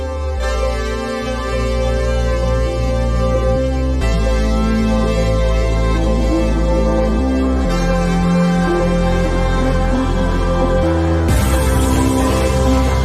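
Two short skips, at 1.26 s and 11.95 s, are most likely dropped buffers (overrun): the capturing program fell behind, the hardware overwrote samples before they were collected, and the audio on either side was spliced together directly. Each is heard as an abrupt jump in the sound with no gap of silence. The first skips only a few milliseconds; the second loses somewhat more, around 7 ms.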